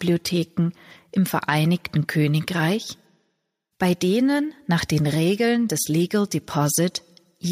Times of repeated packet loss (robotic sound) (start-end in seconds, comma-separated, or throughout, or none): none